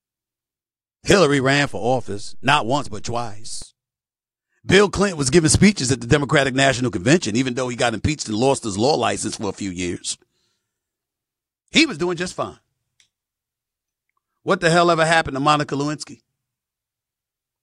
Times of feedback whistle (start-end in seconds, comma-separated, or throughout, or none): none